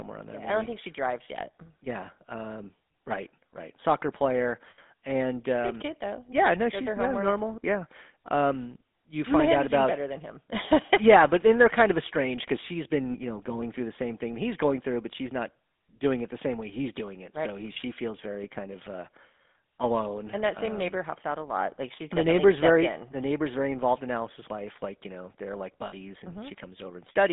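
The whole recording carries the sound of the GSM full-rate codec, a plainly audible buzzy, gravelly roughness that fits 13 kbps GSM full rate. The codec models the vocal tract and drives it with a sparse, regularly spaced pulse excitation, so the natural fine structure of the voice is lost. The line band runs from about 250 Hz to 3.6 kHz, which leaves the speech thin and muffled, with no low body and no upper presence.

Lost GSM frames appear three times. At 4.70 to 4.79 s, just before "and um", about 80 ms is bridged by repeating the last good frame. This produces a short, rough metallic ring instead of the missing sound. At 13.10 to 13.16 s, between "of estranged because she's" and "you know going through", a 40 ms gap gives a briefer rough, metallic ring. At 25.86 to 25.93 s, right after "you know they're like", a 60 ms gap rings the same way. All three are short enough that the held sound never decays to silence.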